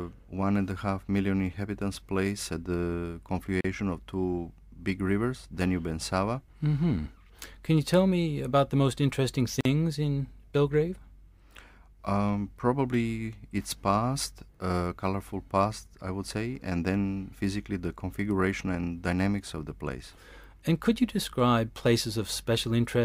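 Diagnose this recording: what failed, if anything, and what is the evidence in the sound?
The failure is at the codec stage, as gaps at the joins of encoded pieces. The sound breaks off in a gap at 3.61 s of about 38 ms and again at 9.61 s of about 46 ms, then resumes exactly where it stopped. Each piece was encoded on its own, and the encoder's start-up delay and last-frame padding were left in at the join. Unlike a network dropout or buffer underrun, no material is lost, and the edges are smeared rather than clicking.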